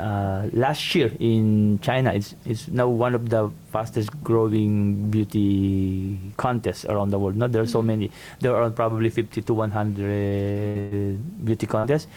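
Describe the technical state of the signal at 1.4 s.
At 1.4 s the signal is intact, with no dropout, distortion, glitch or other fault to be heard.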